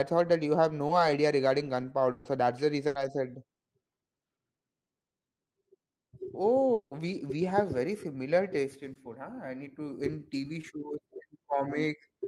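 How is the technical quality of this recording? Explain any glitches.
The recording has network glitches of three kinds, all from audio that never reached the receiver in time.

Short concealed packet loss occurs at 0.87 s, at 8.93 s just after "very similar taste in", and at 10.61 s. Each time, about 20 ms of audio is missing, and the receiver patches it by extending the preceding sound, using its pitch if voiced or shaped noise if not, before blending back into the real signal. The result is a brief smear or wobble lasting a few hundredths of a second.

Bursts of packet loss appear at 2.11 to 2.27 s and 2.87 to 2.97 s, with about 140 ms and 80 ms missing respectively. Several packets in a row failed to arrive, and the receiver kept continuing and fading the last sound across the gap, so a voiced sound turns into a held buzz and other sounds into a dwindling hiss. The audio then resumes further along, with the intervening portion gone.

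At 6.73 to 6.93 s, just before "we we have very", about 180 ms of audio is lost. It begins as a fading buzz or hiss carried over from the preceding sound and decays into roughly 90 ms of silence before the signal returns, skipping the lost stretch. This is likely a long network dropout, where nothing arrived for long enough that concealment ran out and went quiet.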